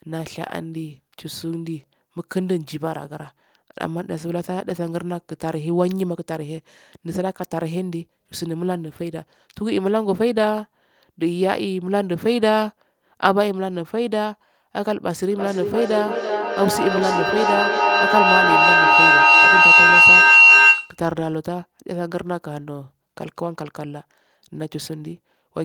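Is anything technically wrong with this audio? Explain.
Yes, there is a feedback howl from 15.31 to 21.06 s. Two devices in the same room are likely joined on one call, so sound leaving a loudspeaker re-enters a microphone and returns louder on each pass. The build-up narrows to a piercing tone near 3 kHz, pulsing roughly every third of a second and peaking about 10 dB above the speech. On a spectrogram it appears as a bright horizontal band; the waveform swells into a dense, loud block.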